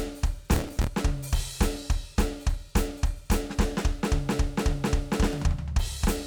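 From 0.52 to 0.87 s the music breaks into processor overload crackle, a gritty tearing laid over it. The processor kept missing its deadlines on small buffers of roughly 5 ms, about twenty times, and each miss replayed a scrap of old audio with hard edges before it caught up.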